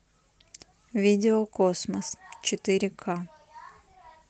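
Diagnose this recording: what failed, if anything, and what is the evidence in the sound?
Nothing failed in this recording.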